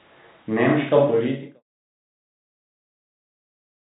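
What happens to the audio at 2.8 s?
Nothing goes wrong at 2.8 s; the audio is intact there.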